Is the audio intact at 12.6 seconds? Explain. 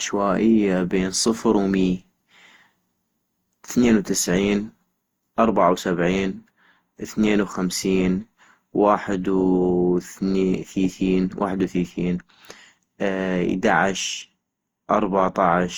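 No, generation loss spans the whole clip. The speech was likely re-encoded around ten times through Opus at roughly 64 kbit/s, leaving it swirly, hollow and smeared, with blurred attacks.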